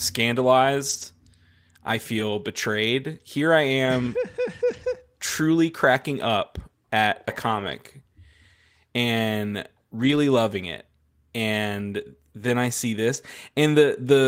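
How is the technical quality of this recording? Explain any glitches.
The speech has seven short patches of degraded sound, each a lost packet rebuilt from error correction.

Packets went missing in transit, and the decoder filled each hole with the low-bitrate backup copy carried in the following packet, so playback never drops out. The patches fall at 0.89–1.03 s, 2.15–2.21 s, 3.85–3.87 s, 4.69–4.87 s just before "truly cracking up at", 7.51–7.69 s, 9.99–10.17 s just before "loving it", and 13.13–13.15 s right after "then I see". They last between 20 and 100 ms, which fits runs of one to five lost packets. In each one the sound turns briefly rougher and noisier because the backup copy holds less detail than the original.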